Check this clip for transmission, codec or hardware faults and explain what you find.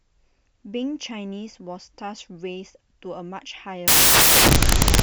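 One fault is present: samples built from the wrong bytes, from 3.88 s to the end of the clip at about 5.03 s. The speech gives way to loud, harsh broadband noise. The reader is assembling each sample from misaligned or swapped bytes, so the rapidly changing low-order bits land in the most significant position. Unlike added background hiss, the noise comes from the samples themselves.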